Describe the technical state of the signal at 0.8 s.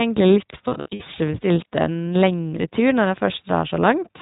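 At 0.8 s the signal sits inside a burst of lost iLBC frames spanning 0.68 to 1.03 s. About 200 ms of audio is missing, scattered over 320 ms in runs of up to roughly 70 ms, which fits around ten 20 ms frames. The decoder fills each gap by repeating the last pitch cycle blended with noise, so the dropouts come across as short held, buzzy vowel-like tones. Because every frame decodes independently, the voice is right again almost immediately after each gap.

Underneath, the whole clip carries the iLBC codec's narrowband coding, consistent with its 15.2 kbps, 20 ms-frame mode. Nothing above 4 kHz is present, so the speech sounds muffled at the top. The excitation coding is plainly audible as a rough, slightly synthetic texture on the voice.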